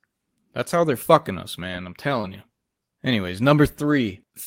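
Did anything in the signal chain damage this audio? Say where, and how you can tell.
Yes. Short concealed packet loss on the network leg: at 2.21 to 2.25 s about 20 ms of speech never reached the decoder. The receiver extended the preceding sound for around 18 ms and crossfaded back, leaving a brief smeared wobble.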